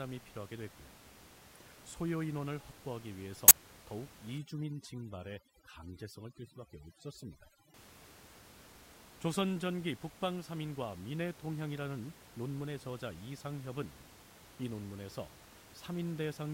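At 3.48 to 3.51 s a corrupt frame is decoded: a couple of compressed frames arrive with flipped bits, and the decoder plays them anyway, so misread gains and codes place energy at the wrong frequencies. The result is a short, fairly loud burst peaking near -10 dBFS that lasts only as long as the damaged frames. Unlike a click from a dropout or splice, it carries energy misplaced across frequencies rather than a bare tick or gap.

From 4.38 to 7.74 s, overdone noise removal takes hold. The room noise, which sits about 17 dB below the speech elsewhere, is suppressed so hard that individual frequency bands near the noise estimate are switched off entirely, taking the quieter parts of the voice with them. The background collapses to near silence speckled with twinkling tones. This differs from low-bitrate codec smearing because it is tied to the noise floor, and its gaps between phrases fall unnaturally dead.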